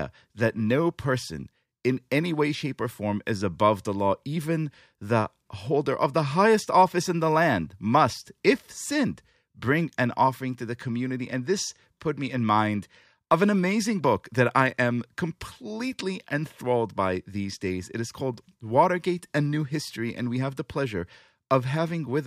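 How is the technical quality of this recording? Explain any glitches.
Good news: there's nothing to explain here, as the recording holds steady the whole way and no glitches turn up anywhere.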